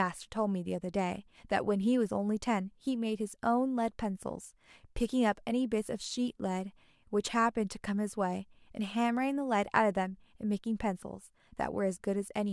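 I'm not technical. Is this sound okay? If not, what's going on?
Yes, nothing wrong with it: no technical faults turn up anywhere in this speech recording.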